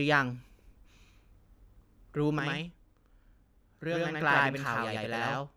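From 2.39 s to the end of the clip, the speech is affected by a channel delay (doubling). One channel runs about 93 ms behind the other, which fits a 4096-sample buffer. When the two are summed to mono, the late copy sits apart from the original at equal level. Each syllable is followed by a distinct slap echo that gives the speech a doubled quality.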